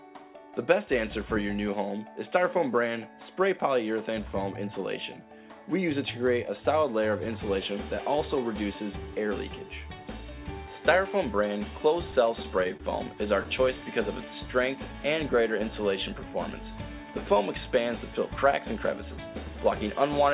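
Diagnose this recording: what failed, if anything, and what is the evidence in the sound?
From 12.12 to 12.82 s the audio hiccups four times, each catch held briefly rather than cut. These are repeated stalls (stutter) at the network and jitter-buffer stage: late packets left the buffer empty, and the receiver stretched the last sound across 55 ms in all, with the longest hold 26 ms and nothing lost.

Between 14.88 and 16.25 s the sound drags at 95% speed with unchanged pitch, gaining 72 ms. This is a jitter buffer slow-down: with its reserve running low, the receiver repeated single pitch periods and slivers of pause to rebuild margin.

From 18.27 to 19.18 s the audio hurries at 111% speed, pitch unchanged, with roughly a tenth of a second taken out. This is a jitter buffer speed-up: holding more audio than its target, the receiver cut short pitch-period pieces to bring the delay back down. 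All of this sits on a narrowband call path with nothing above 4 kHz, consistent with 64 kbps G.711 mu-law.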